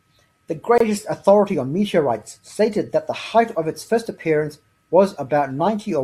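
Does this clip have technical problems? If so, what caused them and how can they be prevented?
Yes. A gap at a join of encoded pieces opens at 0.78 to 0.80 s. A gap of about 25 ms sits between separately encoded speech segments. Trim encoder delay and padding before joining.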